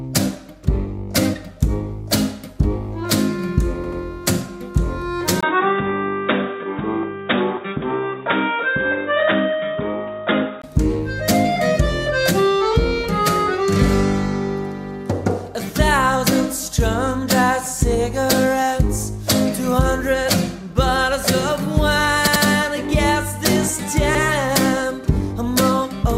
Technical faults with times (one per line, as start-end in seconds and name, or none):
3.84-4.01 repeated buffer
5.41-10.64 input switched to a poorer device
22.27-22.44 repeated buffer
24.15-24.23 repeated buffer